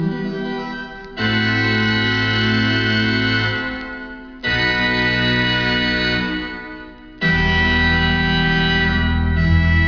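No technical faults can be heard anywhere in the recording. Nothing in the sound breaks, stalls or changes character from beginning to end.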